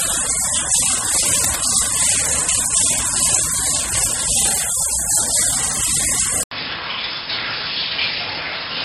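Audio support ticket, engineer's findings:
Whole clip: watery, swirly texture, smeared attacks, nothing above 16.5 kHz. Likely MP3 compression. Encoder starved of bits, dropping weak spectral lines frame to frame and cutting treble. Damage is plainly audible, which fits something like 32 kbps.

1.34 to 1.58 s: brief scratchy, rustling burst over the sound, roughly 10 dB under it. Likely cable scratch noise, a worn cable or connector being moved, contact resistance jumping around and injecting uneven noise.

6.43 s to end: 80 ms gap, then duller, boxier sound, cut off above 5.3 kHz, roughly 5 dB quieter, with a new noise floor around 40 dB down. Likely input switched to a poorer device mid-recording, narrower band and own hiss.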